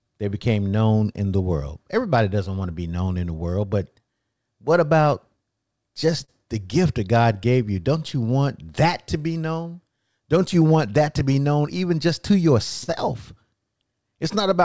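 Clock drift between sender and receiver runs through the whole speech clip. The sender's clock is about 3% slow relative to the receiver, so the jitter buffer keeps draining and the receiver has to make up the shortfall continuously rather than in one place.

From 0.04 s to 14.61 s, repeated timing corrections stretch the audio to about 98% speed, adding roughly a third of a second overall. The repeated pieces are small and unevenly spaced.

Short stalls from late packets occur at 6.25 to 6.30 s and 12.84 to 12.90 s, where the buffer ran empty. The receiver held the last sound for 35 ms and then 41 ms, and nothing was lost. Each sounds like a briefly sustained sound with a slight buzz or dip. The band stops at 8 kHz, which fits G.722 at 64 kbps.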